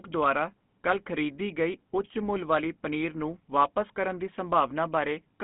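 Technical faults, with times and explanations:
Throughout, GSM full-rate codec: speech sounds buzzy and gravelly, band-limited to about 150 Hz–3.5 kHz, with a regular-pulse excitation roughness rather than the smeared warble of newer codecs.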